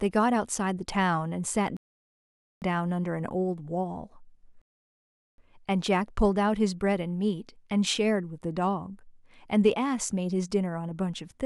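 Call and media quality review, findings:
Rebuffering stall, twice: 1.77–2.62 s and 4.62–5.38 s. Speech drops to silence, then picks up exactly where it left off, nothing skipped. Player buffer ran dry waiting on download; adds about 0.85 s and 0.77 s of dead air. Network delivery side, not the encode.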